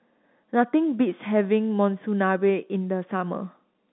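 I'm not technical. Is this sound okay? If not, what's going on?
Yes, this sound is okay: it's ordinary telephone-quality speech, and nothing is going on that needs fixing.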